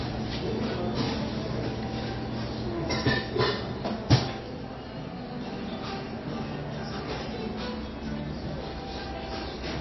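From start to finish the audio has no content above 5.8 kHz, and the plainly audible damage beneath that ceiling has a watery, swirling quality, with faint components flickering in and out and transients sounding smeared. This is likely MP3 compression at a starved bitrate, which fits a rate of about 24 kbps. With so few bits, the encoder discards the treble outright and drops weak spectral lines frame by frame, and that produces the unstable, metallic texture.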